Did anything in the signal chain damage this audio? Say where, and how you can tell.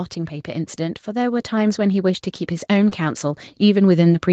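Yes, in three places, all on the call side. From 0.45 s to the end, the automatic gain rises steadily. The level climbs and the background floor climbs right along with it, which is how you tell it's gain control and not someone moving closer to the mic. The AGC judged the input too quiet and kept pushing its gain up over the remaining four seconds or so, with no sign of settling.

Around 2.89 to 2.93 s there's a short concealed packet loss, about 20 ms that never got to the decoder in time. You hear a quick smear or wobble there rather than a dropout, because the receiver patched the hole by extending the sound that came just before it, then crossfaded back into the real signal. A brief consonant landing in that window could easily get swallowed.

The second half of that same window, 2.91 to 2.93 s, is a lost packet rebuilt from error correction. It's a single 20 ms frame, which fits Opus in-band FEC, where the following packet carried a low-bitrate copy. 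It sounds rougher and noisier than its neighbours. With the call already band-limited to 8 kHz by the Opus path, there's no missing top end to notice here.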